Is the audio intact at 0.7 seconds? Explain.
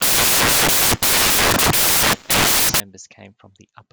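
No, samples built from the wrong bytes run from 0.0 to 2.8 s: misassembled bytes push fast-changing low bits to the top, giving loud, harsh broadband noise over the speech.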